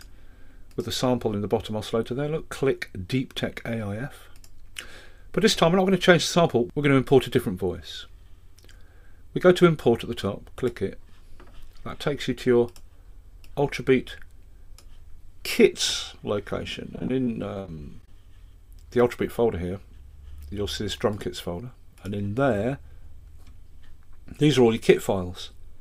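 From 16.95 to 18.08 s there's repeated packet loss, giving that robotic sound. Around a dozen short holes, the longest about 41 ms, get patched by stretching the last bit of audio, so roughly a fifth of that stretch comes out choppy.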